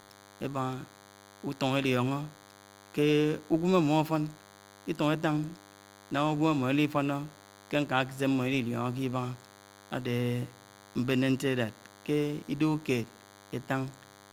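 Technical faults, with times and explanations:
Throughout, DECT cordless phone buzz: a thin, steady buzz sits under the speech, roughly 25 dB below it. A nearby DECT handset or base transmits a brief radio burst every 10 ms, and the audio circuitry rectifies those bursts into sound, giving a 100 Hz buzz rich in harmonics. On a spectrogram it shows as evenly spaced horizontal lines at 100 Hz and its multiples across the whole clip. On the waveform, small regular spikes repeat every 10 ms in the gaps.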